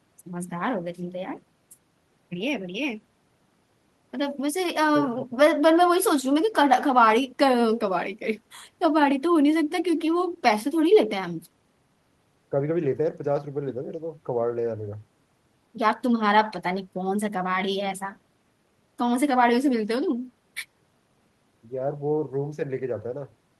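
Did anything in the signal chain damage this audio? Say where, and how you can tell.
No, nothing in this speech recording stood out on listening as damage from any stage of the signal chain.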